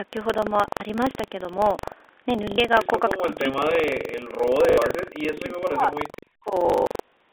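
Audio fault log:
Throughout: buffer tearing. A steady robotic rattle at about 23.4 Hz rides on the speech and stops in the pauses, which fits a 2048-sample ring buffer. The writer and the reader cross inside every period, so roughly a tenth of each buffer replays audio from about 150 ms earlier, with hard joins on either side.
0.75–0.80 s, 2.50–2.58 s, 4.70–4.78 s and 6.68–7.12 s: packet loss with last packet repeated. Gaps of 60 ms, 80 ms and 80 ms are filled by replaying the previous packet. The final stretch loses 300 ms scattered over 440 ms, and its longest run is 120 ms. Each replayed segment seldom lines up with the pitch. Runs buzz near 50 Hz, which points to 20 ms packets and gives a short robotic stutter.
3.28–5.95 s and 6.41–6.54 s: speech suppressed in double talk. The talker's level sinks in pieces, by as much as about 40 dB in the first span and about 30 dB in the second, affecting roughly two seconds in total. 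The likely cause is an echo canceller that could not tell the talker from loudspeaker echo while both sides spoke, and so turned both down.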